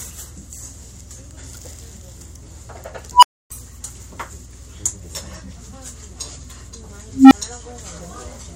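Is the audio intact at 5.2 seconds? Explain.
Yes, at 5.2 seconds the sound plays through cleanly, with no dropout, click, distortion or other fault at that moment.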